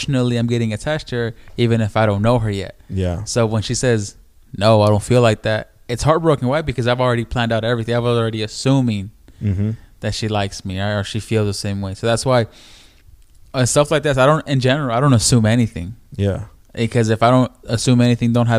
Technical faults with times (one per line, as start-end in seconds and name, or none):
none